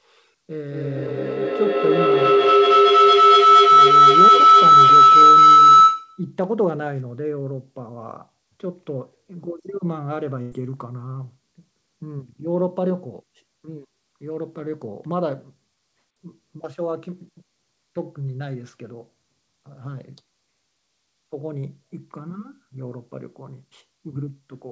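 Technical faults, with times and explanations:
0.61–6.32 s, feedback howl: A tone near 1.5 kHz swells until it sits about 16 dB above the speech, with the loop repeating roughly every 200 ms. Two devices share the room and the call. Each trip around the microphone-to-loudspeaker loop adds gain, so the tone grows.
10.42–10.53 s, burst of packet loss: About 94 ms is a concealment fill. Packets went missing, so the receiver stretched the last sound and faded it down. Playback then resumes further on. The 100 ms of speech in between is gone.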